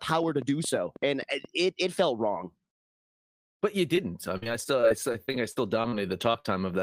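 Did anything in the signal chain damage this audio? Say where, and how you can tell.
Yes. Three kinds of damage are audible.

A train of clicks runs from 0.10 to 1.46 s, ending just before "it it felt wrong". It is roughly ten sharp ticks at an uneven pace of about 7.4 per second, peaking about 5 dB above the signal. The likely cause is interference in the analogue wiring or a faulty connection or power supply. On a spectrogram these appear as thin full-band vertical lines, and on the waveform as isolated spikes.

Short concealed packet loss occurs at the network stage at 3.95–3.99 s, 6.32–6.36 s and 6.40–6.46 s, with about 20, 20 and 40 ms lost. The decoder extended the preceding sound and then blended back. The spectrogram shows the preceding sound smeared flat across each gap, and each patch is heard as a brief wobble.

Repeated packet loss (robotic sound) covers 4.37–5.94 s. Eleven gaps totalling about 260 ms, the longest 45 ms, were patched, so about 16% of that stretch is synthetic. 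It sounds choppy. On a spectrogram it looks like repeated frozen, striped segments interrupting the normal harmonic detail.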